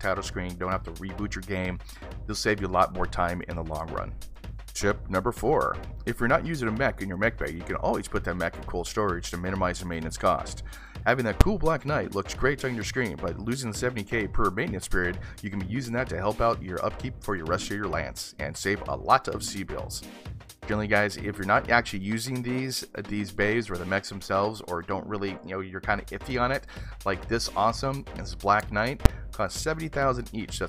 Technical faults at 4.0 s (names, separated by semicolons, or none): none